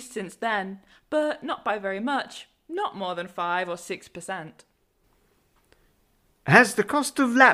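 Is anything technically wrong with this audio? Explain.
Yes. At 5.04 s there is a sudden gain jump lasting to the end of the speech clip. The likely cause is a digital gain change applied from one sample to the next, with no ramp to ease it in. Everything after that point is about 5 dB louder, the speech and the background noise rising together in a single step rather than a gradual fade.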